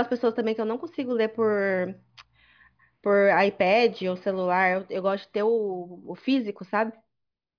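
No technical faults can be heard anywhere in the recording.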